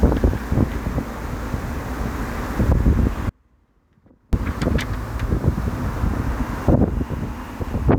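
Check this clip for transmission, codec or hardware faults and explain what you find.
One fault is present. From 3.29 to 4.33 s there is an audio dropout to a faint residue. The signal cuts abruptly for about 1.04 s, leaving only a faint leak roughly 35 dB down, likely from a break upstream while the later path stayed live.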